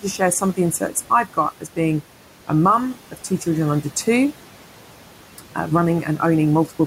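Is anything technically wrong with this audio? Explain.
Yes, noise suppressor artifacts run through the whole clip: bands judged to be steady noise are cut by about 12 dB frame by frame, so the room noise, about 16 dB below the speech, drops away between words and returns beneath them.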